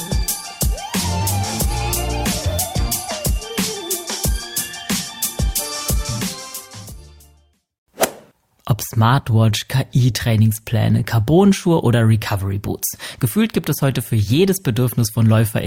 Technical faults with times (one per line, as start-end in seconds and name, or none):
none